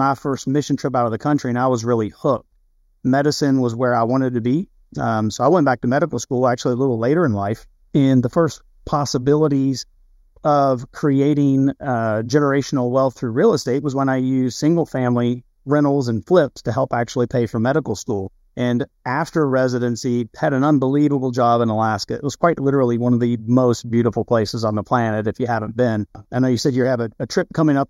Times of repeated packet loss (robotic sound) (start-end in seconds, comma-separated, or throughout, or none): none